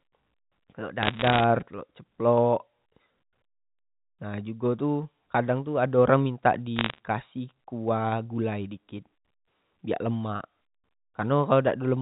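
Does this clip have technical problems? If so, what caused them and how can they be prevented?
Yes. Bit errors on a digital phone line cause crackle at 1.03–1.44 s, before "telok ceplok", and 6.76–6.98 s, before "kasih kuah gulai dikit". Flipped bits each corrupt one sample, so ticks sit over intact speech rather than gaps. Error-checked digital links prevent this.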